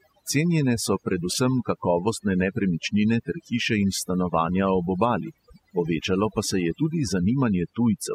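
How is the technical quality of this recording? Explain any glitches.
The recording is marred by overdone noise removal from start to finish. The reduction was set too aggressively, muting frequency bands whenever they sat close to the estimated noise floor, which took low-level parts of the speech with them. The background drops and breaks up into twinkling specks.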